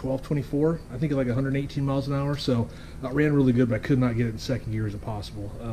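Nothing here stands out as a technical problem, and the sound runs its whole course without any dropout, glitch or interruption catching the ear.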